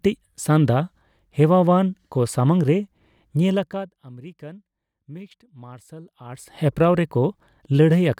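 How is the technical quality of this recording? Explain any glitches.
The speech has audible zipper noise in two places, where the level moves in stepped jumps rather than a continuous ramp. From 3.41 to 4.02 s, just before "ᱟᱢᱮᱨᱤᱠᱟᱱ ᱢᱤᱠᱥᱰ ᱢᱟᱨᱥᱟᱞ", the level drops by roughly 20 dB. From 6.24 to 6.59 s, just after that phrase, it rises by roughly 20 dB in 1 dB steps. In both cases the gain updates about a hundred times per second with no smoothing, so each step clicks and the changes are heard as a fast ticking buzz over the speech.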